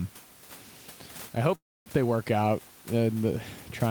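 A likely delay in packet delivery drained the jitter buffer in this speech recording, producing a call audio freeze from 1.55 to 1.88 s, just before "they work out". The receiver stretched the last sound into a brief fading tail, then about 0.25 s of silence. Room noise sits about 21 dB below the speech. When the packets arrived the speech resumed where it had stopped, so nothing is lost, but everything after it runs about 0.3 s late.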